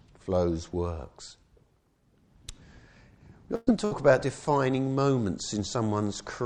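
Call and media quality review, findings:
Held, fading smear at 3.55 to 3.70 s, ending in a brief dropout of about 10 ms before audio resumes further on. Burst of packet loss in the receive path: roughly 120 ms of audio missing, concealed by extending and attenuating the last sound.

Second, shorter smear at 3.85 to 3.94 s. Same burst of packet loss mechanism: about 60 ms of audio gone, bridged by about 60 ms of decaying concealment, then a jump ahead in the audio.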